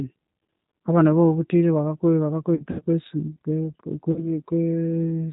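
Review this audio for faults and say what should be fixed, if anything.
G.729 codec runs throughout the speech. Everything above 4 kHz is missing, and the voice has a rough, slightly synthetic texture from being rebuilt out of a vocal-tract filter, a pitch predictor and a handful of pulses per 5 ms subframe. The damage is plainly audible and fits G.729A at 8 kbit/s. To prevent it, negotiate a wideband codec such as G.722 or Opus on this link instead of G.729.

VoIP packet loss concealed by the speech codec occurs three times. At 0.46–0.48 s, just before "abana abawabuthire", 20 ms of audio is missing. At 2.55–2.83 s, 120 ms is lost in scattered gaps across 240 ms, with the longest run 80 ms. At 4.12–4.28 s, about 40 ms is lost. In each gap the decoder repeats its last pitch and filter with falling gain, giving a buzzy tone or coloured noise that fades, and the voice stays weak briefly afterwards. 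To prevent it, reduce network loss with QoS marking, and add FEC or redundancy with a properly sized jitter buffer.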